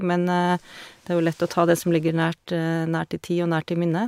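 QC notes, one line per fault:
No technical faults can be heard anywhere in the recording; the signal holds steady with nothing breaking in to disturb it.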